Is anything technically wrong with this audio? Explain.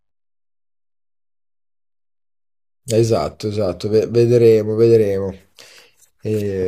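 No, nothing technically wrong can be heard in this speech recording. No fault in the signal chain shows up anywhere in the clip.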